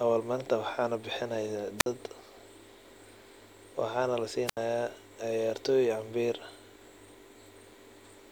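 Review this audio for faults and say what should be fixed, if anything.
Wireless microphone squelch dropout at 1.78–1.87 s (about 53 ms muted) and 4.46–4.57 s (about 75 ms muted): the radio signal fades, the receiver's squelch mutes the speech, and the waveform shows flat gaps and the spectrogram shows blank vertical slots. To prevent it, keep a clear line of sight between transmitter and receiver, use diversity antennas, and check batteries and frequency coordination.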